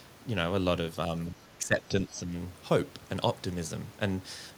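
Speech, with speech suppressed in double talk between 1.36 and 2.32 s. About half a second drops by roughly 15 dB, likely from echo-canceller ducking. This shows as a pinched waveform and fainter spectrogram bands.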